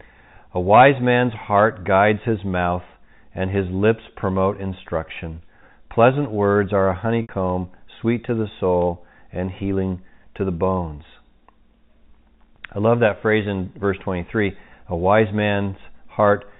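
A speech recording carried over G.711 telephone coding, so nothing above 4 kHz comes through. At 7.22 s, right after "words are a", the sound briefly holds on a slightly buzzy, sustained tone for about 70 ms before resuming with "sweet to the soul": packet loss with pitch repetition, where the receiver looped the last pitch period to cover the missing packets.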